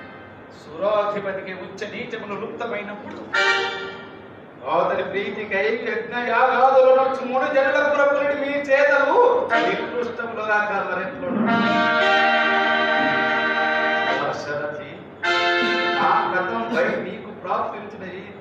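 The audio has one fault, a skip of compressed frames at 5.7 s. About three frames never reach playback, so roughly 70 ms of sound goes missing. The gap fits 23.2 ms codec frames.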